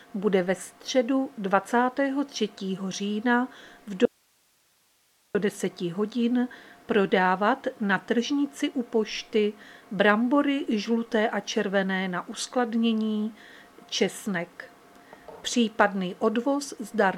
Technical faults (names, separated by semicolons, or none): audio dropout to a faint residue